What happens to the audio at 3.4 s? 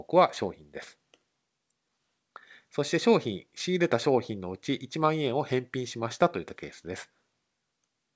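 Nothing goes wrong at 3.4 s; the speech carries on intact through the call path, with the band ending at about 8 kHz as G.722 at 64 kbps delivers it.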